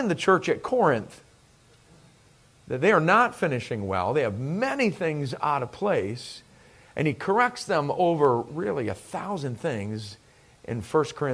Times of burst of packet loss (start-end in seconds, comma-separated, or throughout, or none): none